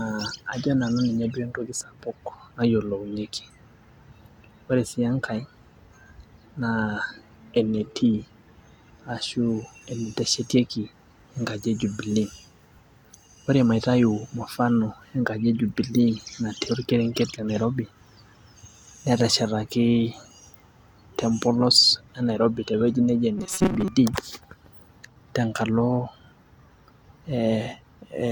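From 23.38 to 23.88 s the speech goes robotic, the classic robotic sound from repeated short buffers. For that half second the voice loses its natural inflection and becomes a stiff, metallic buzz pinned at 188 Hz, still loosely tracking the syllables. That buzz frequency fits a chunk of roughly 5.3 ms being played over and over. The likely cause is audio arriving late, so playback kept looping that last tiny slice, with about half the material repeated rather than fresh.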